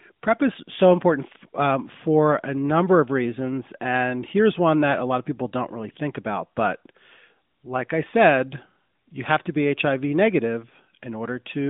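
No technical faults are present.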